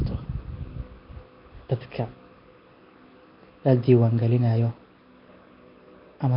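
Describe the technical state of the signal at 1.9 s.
Nellymoser compression is audible at 1.9 s, as it is across the whole clip. The speech carries a rough, hissy halo and a smeared, underwater quality, and nothing is heard above 5.3 kHz. This is likely the Flash-era Nellymoser Asao codec at work. It spends a fixed, tiny bit budget on each short block, which fits a rate near 22 kbps. Bands it cannot afford are replaced with noise, causing the heavy grainy damage.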